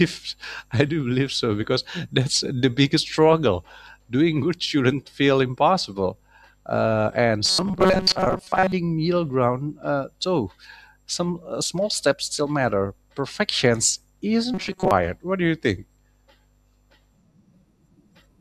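A speech clip that twice turns into a rigid, metallic buzz, from 7.46 to 8.72 s and again from 14.54 to 14.91 s. The voice still roughly tracks the words, but a fixed pitch of 188 Hz sits over it. This robotic sound from repeated short buffers is likely caused by audio arriving too seldom, so the software keeps replaying a snippet of about 5.3 ms, which fits the 188 Hz buzz, while most of the real audio in those stretches is skipped.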